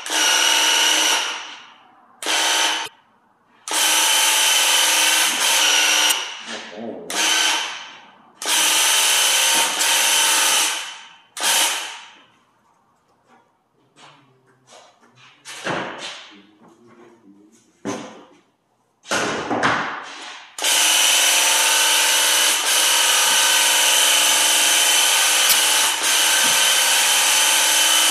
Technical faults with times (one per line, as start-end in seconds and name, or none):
2.84-2.88 damaged data in a compressed stream
6.08-6.12 damaged data in a compressed stream
9.80 damaged data in a compressed stream
20.22-20.24 damaged data in a compressed stream
25.48-25.53 damaged data in a compressed stream